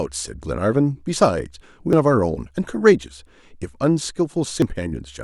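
Damaged data in the compressed stream hits this speech twice, at 1.93 s and again at 4.62 s. At each point a stretch of the encoded bytes is corrupt, so the decoder can't read the frame it expects, loses its place in the stream and has to hunt for the next valid frame header before normal decoding resumes. Each time, that breaks through as a brief, harsh chirp or blip cutting across the speech.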